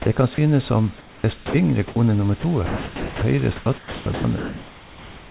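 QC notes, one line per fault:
0.02–0.06 s, 0.34–0.38 s, 1.88–1.96 s: sound dropped by the voice detector. The sender's detector likely took quiet speech for background and stopped sending. The receiver filled 40, 40 and 80 ms with comfort noise, so speech briefly gives way to steady hiss, then returns.
0.98–1.54 s, 2.40–3.22 s, 3.56 s to end: sound chopped by the voice detector. The detector likely flipped repeatedly between sending and muting, replacing 440, 600 and 1410 ms with comfort noise. Syllables break up.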